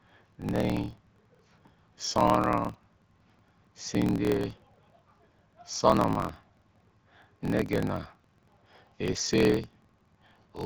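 Throughout, a block size mismatch (truncated) drops each block's tail, giving a 43.1 Hz buzz that fits 1024-sample reads, and 1.12× faster speech with unchanged timbre.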